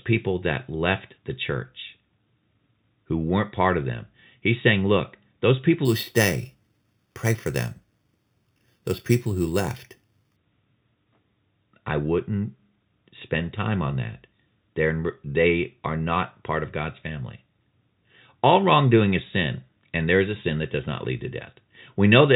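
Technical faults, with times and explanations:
5.85 to 10.36 s, imaging from sample-and-hold upsampling: after "saying look those people", each sample was repeated without smoothing, which fits an 8 kHz source raised to 44.1 kHz. Mirrored spectrum fills 4 to 8 kHz, about 15 dB down: a metallic fizz moving opposite the pitch.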